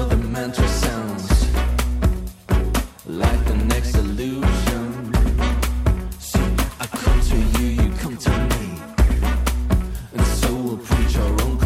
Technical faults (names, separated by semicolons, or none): none